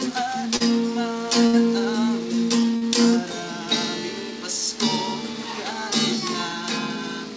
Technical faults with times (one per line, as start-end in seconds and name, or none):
0.56-0.62 short stall from a late packet
1.46-1.55 short stall from a late packet
2.76-2.83 short stall from a late packet